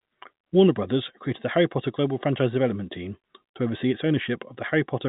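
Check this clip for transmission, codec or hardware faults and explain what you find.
No faults found.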